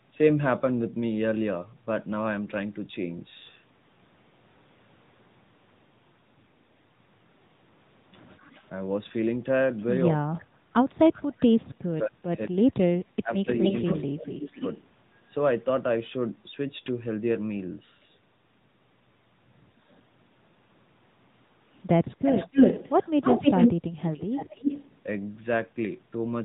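The whole clip runs through the AMR narrowband mobile codec at 10.2 kbps. Nothing above 4 kHz survives, and the speech has that buzzy, synthetic edge. At 8.4 to 8.63 s there's a faint echo leak, a copy about 242 ms late and roughly 35 dB down, likely from a loudspeaker the echo canceller didn't fully clean up. From 10.16 to 12.67 s the talker dips hard, up to about 30 dB for around a second and a half, likely speech suppressed in double talk. It happens again at 13.22 to 14.61 s, shallower at about 15 dB. Overlapping that, 13.62 to 14.72 s brings a much louder echo leak, 261 ms late and only about 5 dB under the speech. The worst is 22.25 to 24.97 s, where the echo comes back 293 ms late at roughly the same level as the speech itself.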